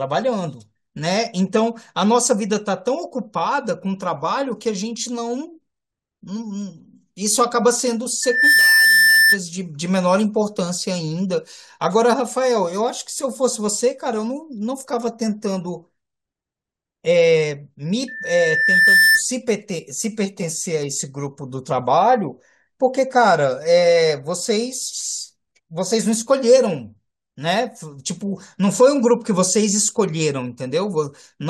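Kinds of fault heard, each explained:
Loudspeaker feedback squeal: the microphone picks up its own loudspeaker, and at 1.8 kHz the loop gain tops one, so that tone feeds itself. It swells into a squeal rising to roughly 5 dB above the speech twice, near 8.2 to 9.4 s (fast build) and 18.1 to 19.2 s (slower, about a second).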